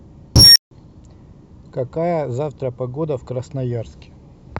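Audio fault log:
0.36 to 0.71 s, unstable filter: a high squeal near 5 kHz swells over 200 ms into harsh clipping, then the audio cuts out for 155 ms. A recursive filter with bad coefficients fed back on itself until its numbers overflowed and the filter reset.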